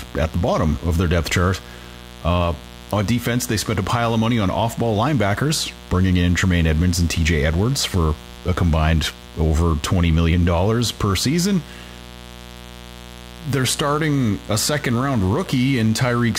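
Mains buzz runs through the whole speech clip: sharp 60 Hz switching spikes with harmonics into the kilohertz range, a steady raspy buzz roughly 20 dB below the speech.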